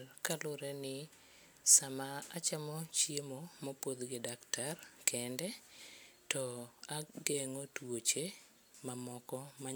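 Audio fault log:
No technical faults are audible in the speech at any point, and the signal keeps unbroken continuity from its first moment to its last.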